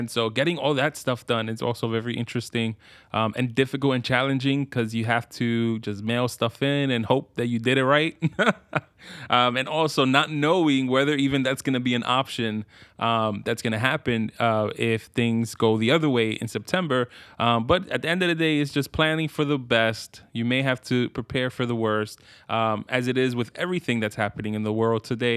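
No technical faults are audible at any point in the speech recording.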